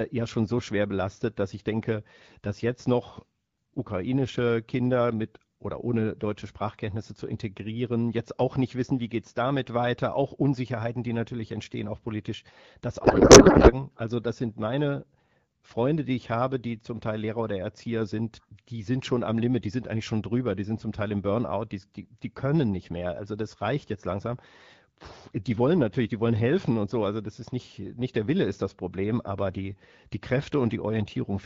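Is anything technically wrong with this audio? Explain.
Yes, there is one fault. A codec payload misread runs from 13.03 to 13.73 s, just after "entstehen auch politisch das". The sound points to the sender and receiver packing the AMR frame bits differently, likely octet-aligned frames being read as bandwidth-efficient ones. The decoder then pulls its fields from the wrong bit positions. For those 0.7 s the speech gives way to garbled noise and warble that barely tracks it. Around this, the light AMR-WB coding fits a rate near 12.65 kbit/s.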